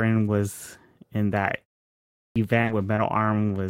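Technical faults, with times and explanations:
2.27 to 2.36 s, clipped start after a pause: the sound begins abruptly, missing its first 87 ms, because the output device slept through the 0.7 s pause and woke late.
2.61 to 2.71 s and 2.95 to 2.99 s, short concealed packet loss: brief smears replace missing audio, 20 ms then 40 ms back to back, and another 20 ms, filled by extending the preceding sound.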